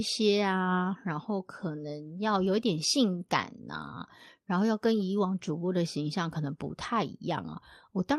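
At 3.85 to 3.87 s and again at 6.29 to 6.31 s, a lost packet rebuilt from error correction leaves a brief rough, noisier patch, each about 20 ms. This suggests a single lost packet replaced by its low-bitrate copy. A spectrogram shows a short smeared, grainier slice with no waveform gap.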